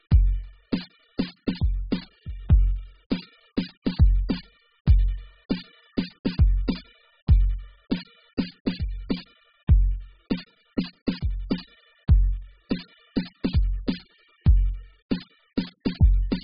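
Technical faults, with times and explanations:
Throughout: AAC compression. The music sounds dull, with nothing above 5 kHz, and sustained tones warble and smear. This likely comes from heavy AAC-LC coding at a very low bitrate, which fits about 8 kbps, where the encoder discards high bands and coarsely quantises the rest.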